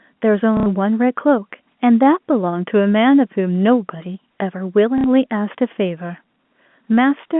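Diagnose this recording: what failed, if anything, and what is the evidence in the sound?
The failure is in the network stage: packet loss with last packet repeated. At 0.57 s the speech stutters for about 90 ms, and again at 4.98 s for about 60 ms. The receiver replayed the last good packet, and each copy joins out of step with the pitch, giving a robotic buzz. The 30 ms repetition fits a 30 ms packet size. Unlike a dropout, the gap is filled rather than silent, and the G.711 telephone band carries the repeats intact.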